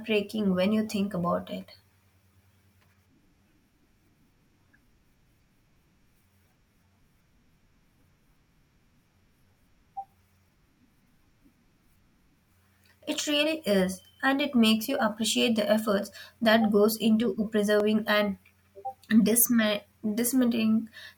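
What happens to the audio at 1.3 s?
Nothing goes wrong at 1.3 s: the speech there plays through intact, with no dropout, click, distortion or other fault.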